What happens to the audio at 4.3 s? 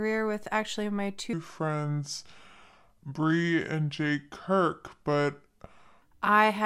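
At 4.3 s the speech is inside a section at the wrong speed, running from 1.33 s to 6.02 s. Across that stretch the audio plays back at 0.73 times its recorded rate, most likely because that portion was clocked at the wrong rate during editing or playback. Since speed and pitch move together, the voice drops about five semitones, sounding deeper, slower and drawn out, before snapping back to normal at 6.02 s.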